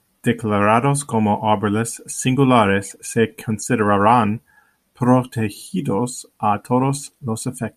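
No technical faults can be heard anywhere in this recording.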